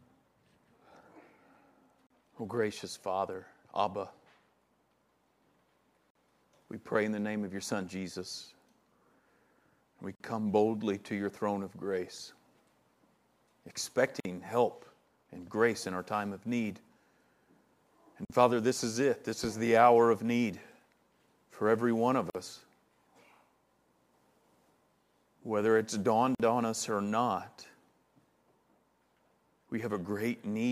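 Separately encoded pieces were joined without trimming, so each join keeps one encoder's start-up delay and another's padded final frame. The result is a gap at a join of encoded pieces roughly every 4 seconds: at 2.07 s (35 ms), then 6.10, 10.15, 14.20, 18.25, 22.30 and 26.35 s (49 ms each). Each is a short, abrupt dropout in continuous sound, its edges smeared, after which the audio resumes exactly where it stopped.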